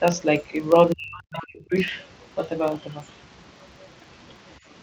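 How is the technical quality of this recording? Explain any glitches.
The recording has three problems: a steady buzz throughout, and a short stretch where the speech is pushed down while fragments of another voice get through.

Filter restarted on every block: a filter in the chain loses its memory at each block boundary and restarts from silence, so every block opens with a tiny transient. These clicks repeat 25 times a second, which points to blocks of about 40 ms. They merge into a low buzz under the whole clip, louder where the speech is louder and fading in the pauses.

Speech suppressed in double talk: between 0.93 and 1.74 s the talker's level collapses, dropping by as much as about 40 dB. About 0.7 s of that window is affected. This is likely an echo canceller that heard both sides at once, could not tell the talker from the loudspeaker echo, and attenuated everything while the far side was active.

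Other side's voice leaking through: from 1.39 to 1.47 s a second voice can be heard, about 15 dB below the speech. Another brief scrap follows from 1.76 to 1.82 s at about 30 dB down. The far side was likely playing on the talker's loudspeaker, and the echo canceller left some of it in the microphone signal. The result is short snatches of a voice that does not belong to the talker.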